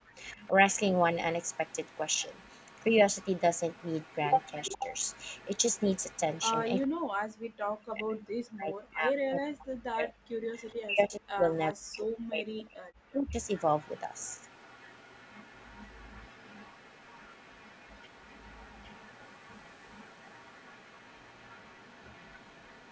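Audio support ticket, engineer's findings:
Background gated by the echo canceller, 0.00–0.08 s: room tone dips about 32 dB for under 0.1 s while far end plays. Only background drops, no voice loss, unlike double-talk suppression.

Echo leak at 0.15–6.41 s, 6.76–6.88 s, 10.64–10.75 s and 13.43 s to end: faint repeat of far-end speech at a fixed 421 ms delay, about 25–30 dB down. Likely residual from the loudspeaker side's canceller. The constant delay separates it from room reverb.

Speech suppressed in double talk at 0.36–0.53 s (shallow, about 5 dB), 4.69–4.85 s (about 30 dB) and 6.89–13.41 s (up to about 40 dB, roughly 5 s affected): near talker ducks while both sides speak. Likely canceller attenuation during overlap. The talker's own voice drops, not just background.

Mic processing: band-limited to 8 kHz with low bass removed, expected for call audio.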